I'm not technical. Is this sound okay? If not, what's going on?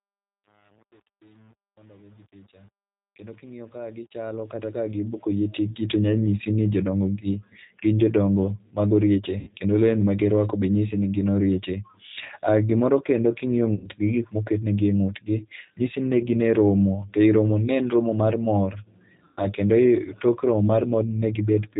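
No. Three things went wrong.

Throughout, the speech was squeezed through the G.729 codec, a compression system built for internet phone calls. Instead of storing the actual sound, it stores a rough recipe for the voice and rebuilds it at the other end, and it throws away everything above 4 kHz. So the whole clip sounds muffled like a phone line, with a slightly rough, artificial edge on the voice.

At the start, the clip fades in up to about 5.98 s, but that fade suffers from truncation distortion. The volume control doing the fade kept too little detail, which fits a fade handled at about 8 bits, with no added smoothing noise. When the level is very low, the sound wave becomes a few coarse steps. From 0 to about 5.03 s especially, the quiet sound turns gritty.

Three times, pieces of the call got lost on the way and the codec covered the gap with VoIP packet loss concealment. It guesses what came next by repeating its last bit of voice while fading it down, and the voice then needs a moment to recover. 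This happens at 9.39 to 9.50 s, 13.74 to 13.88 s, and 19.25 to 19.44 s, just after "en romo mar mor". Each spot brings a short buzzy, stretched or noisy sound, then weak, distorted speech that takes a moment to recover.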